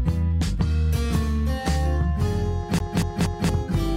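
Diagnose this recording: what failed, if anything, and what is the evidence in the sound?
The failure is at the playback stage: the CD is stuck on one turn. From 2.79 s to 3.49 s the same 235 ms stretch of sound plays three times. A brief mute marks each jump back. The repeats are evenly spaced, giving the fast, regular stutter of a skipping disc. A scratch at one point on the disc sends the laser back a track every revolution, so that piece of audio keeps recurring.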